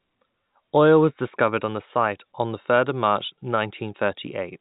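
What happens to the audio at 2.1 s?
Nothing goes wrong at 2.1 s; the speech carries on intact through that moment, with only the usual narrow band of G.711 telephone coding.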